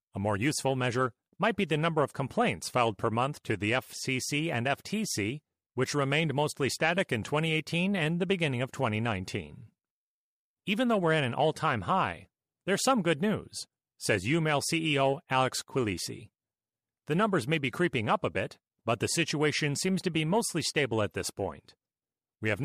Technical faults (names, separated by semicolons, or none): none